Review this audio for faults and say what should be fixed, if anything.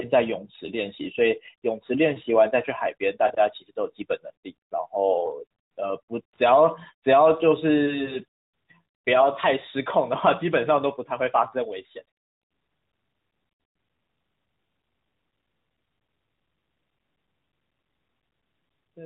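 Lost AMR speech frames occur at 3.28–3.32 s, a brief dip that fits a single missing 20 ms frame, and at 8.04–8.19 s. There the decoder stretches the last good pitch and spectral shape with falling gain, which fits two consecutive losses. Prevent this with stronger channel error protection or better radio coverage on the call path.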